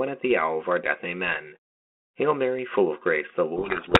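From 3.56 s to the end, a codec payload misread buries the speech in harsh distortion. The G.726 code words arrive with their bit order reversed, so the decoder rebuilds the wrong differences.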